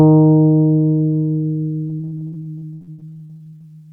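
Repeated packet loss (robotic sound) runs from 1.87 s to 3.65 s. Over that stretch packets kept going missing or arriving too late, and each hole was patched by extending the last stretch of sound before the next gap arrived. In all, about 0.74 s was filled in this way, 41% of the span, with the longest single gap 71 ms. The sound turns choppy, stuttering with small pieces missing.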